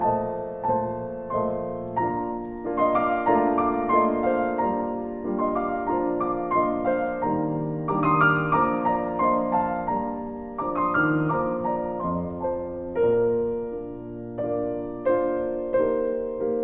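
No technical faults can be heard anywhere in the recording. Nothing in the audio breaks, drops out or shifts in level at any point.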